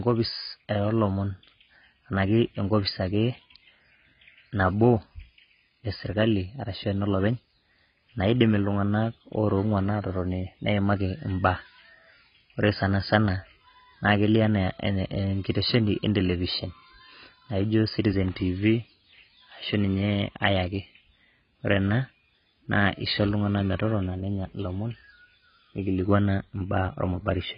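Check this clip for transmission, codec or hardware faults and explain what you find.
The speech carries a single fault that runs from start to finish: AAC compression damage, and it is heavy. Nothing is present above 5 kHz, so the sound is dull and muffled. Sibilants lose their edge and turn fizzy. Sustained sounds warble. The likely cause is AAC-LC coding at a very low bitrate, which fits about 16 kbps. The coder drops the high band and quantises the rest coarsely, so detail smears and gaps open in the spectrum.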